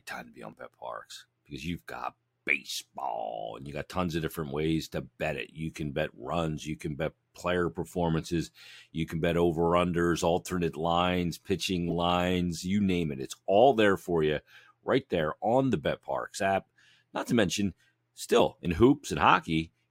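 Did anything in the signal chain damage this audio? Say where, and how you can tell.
Yes. The codec stage played corrupt frames as if they were valid. Short chirpy bursts occur at 9.20 to 9.22 s, 11.89 to 11.92 s and 15.20 s. The middle one is loudest. Each lasts a few frame lengths. Flipped bits pushed energy to wrong frequencies.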